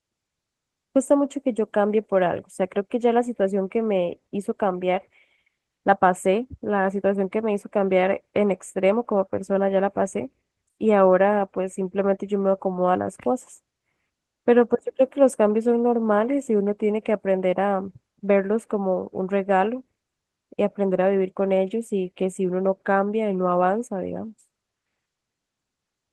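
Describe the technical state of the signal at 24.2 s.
At 24.2 s the speech signal is intact, with no audible technical fault at that moment.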